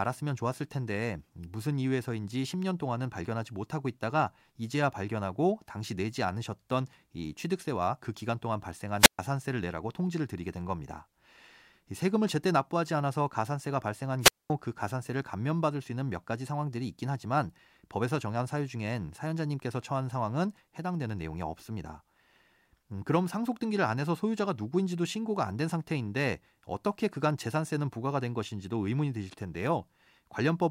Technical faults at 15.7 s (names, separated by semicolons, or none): none